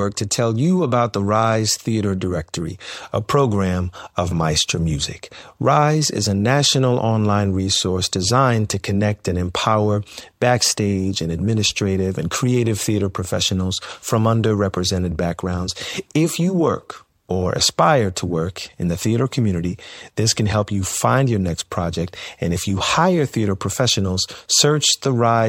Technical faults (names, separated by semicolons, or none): pre-echo